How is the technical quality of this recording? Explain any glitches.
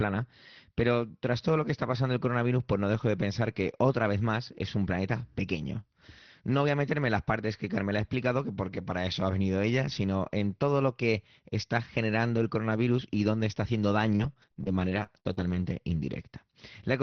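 The one clear problem is a burst of repeated packet loss (robotic sound) from 14.15 to 15.67 s. Eight short dropouts, the longest about 55 ms, leave about 17% of that stretch concealed. Each hole gets patched by stretching the previous sound, so the speech turns choppy for about 1.5 s. The audio also shows the dull, roughly 6 kHz top end you'd expect from Opus on a call.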